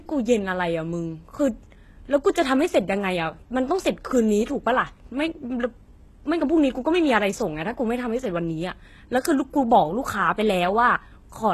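Throughout the speech, the treble sounds rebuilt rather than recorded, with nothing above 12.3 kHz. S sounds turn gritty and lispy, pointing to likely HE-AAC compression near 16 kbps. Unlike a plain low-pass, the highs stay bright but metallic, copied upward from lower bands.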